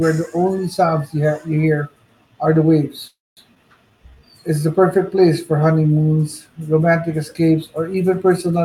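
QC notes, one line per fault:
3.07–3.40 s, call audio freeze: right after "you hear are the", the sound stops and is stretched out by a decaying fill that fades to silence for about 0.23 s of its 0.29 s. The likely cause is packets held up in transit so the jitter buffer ran dry. Playback then resumes where it left off, adding delay rather than losing anything.
3.55–3.59 s, skip ahead: playback jumps forward with only a tiny bridging fill of 8 ms, so roughly a tenth of a second of audio is gone and the two sides butt together almost directly. This is what happens when a stretch is dropped while later audio is already queued.
3.90–4.61 s, jitter buffer slow-down: leading into "the perfect place for", the audio runs at 86% speed with unchanged pitch, about 106 ms longer than it should be. Single pitch periods are being repeated back to back to rebuild the buffer's reserve, giving drawn-out sounds.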